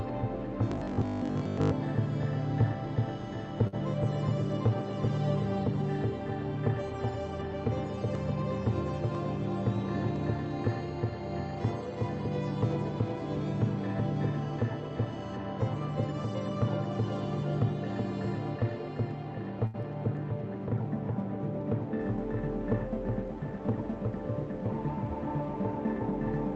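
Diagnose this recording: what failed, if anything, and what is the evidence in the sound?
From 0.72 to 1.72 s the sound turns into a rigid, metallic buzz at a fixed 50 Hz that tracks the original only loosely. This is robotic sound from repeated short buffers. The likely cause sits at the driver or buffer stage: fresh audio arrived too seldom, so the software kept replaying the last piece. A 50 Hz repeat rate fits 20 ms pieces. Most of that second is repeated material, while the real audio is skipped.

There are two short stalls from a late packet, at the network stage. From 3.67 to 3.75 s a sound is held for 51 ms. From 19.67 to 19.76 s a sound is held for 72 ms. In each case a packet was late and the jitter buffer ran dry. The receiver stretched the last sound until the packet arrived, then resumed where it left off. Nothing is lost, but the delay grows by the held time.

From 19.82 to 19.85 s there is a short concealed packet loss on the network path. 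It comes just after the second stall. Here 20 ms of audio never reached the decoder in time. The receiver covered the hole by extending the last sound for 10 ms, then blended back into the real audio. The result is a brief smear at that point.

From 22.85 to 24.58 s there is a jitter buffer speed-up in the call processing. The buffer held more audio than its target, so the receiver trimmed short pitch-period pieces over and over. About 50 ms was removed in total. Playback runs at 103% speed with the pitch unchanged. This all sits on an Opus call path at around 48 kbps, where nothing above 8 kHz comes through.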